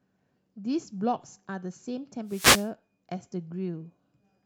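A wireless microphone noise hit runs from 2.26 to 2.71 s, a burst of static lasting about 0.45 s. The FM radio link between microphone and receiver faded as reflected signals cancelled, letting receiver noise swell up and wash over the speech before clearing.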